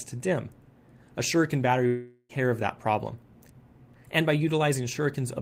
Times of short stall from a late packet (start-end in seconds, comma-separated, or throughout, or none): none